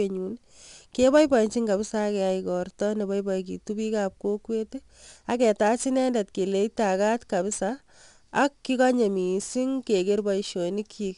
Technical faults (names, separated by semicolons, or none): 4-bit ADPCM compression